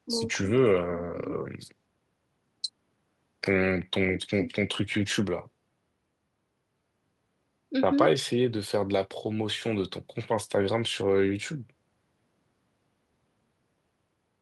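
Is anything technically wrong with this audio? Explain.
No, nothing technically wrong stood out on listening to this speech clip.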